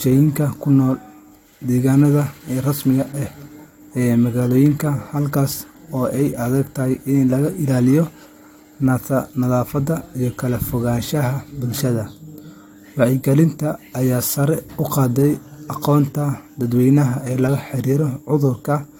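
Nothing in this speech recording stands out as a technical fault at any point, so there's nothing here to flag.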